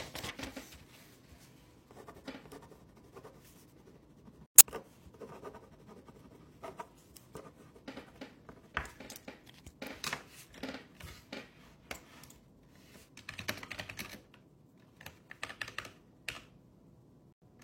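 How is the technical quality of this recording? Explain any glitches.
The recording has three brief glitches from damaged compressed data.

At 4.46 to 4.62 s and again at 17.33 to 17.47 s, the sound drops to abrupt silence for about 0.15 s. These are corrupt frame muted faults: flipped bits made the decoder reject the frames, and the player filled the gap with silence. The gap lengths fit a few frames each, and timing is preserved.

At 6.83 to 6.87 s, a 40 ms glitch of out-of-place sound cuts in. This is a corrupt frame decoded fault: one damaged frame was played anyway, and its misread values put energy at the wrong frequencies.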